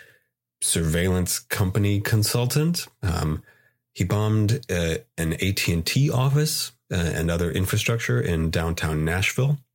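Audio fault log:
Nothing stood out on listening to the speech here.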